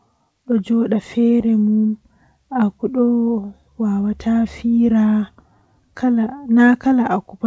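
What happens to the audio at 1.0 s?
At 1.0 s the speech is intact; the WebRTC call path behaves as expected there, with its usual band limit leaving nothing above 8 kHz, consistent with a G.722 codec.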